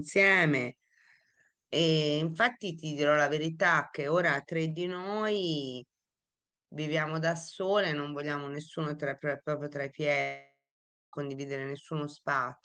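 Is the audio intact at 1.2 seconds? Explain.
Yes, at 1.2 s the audio is intact, with no dropout, click, distortion or other fault to be heard at that moment.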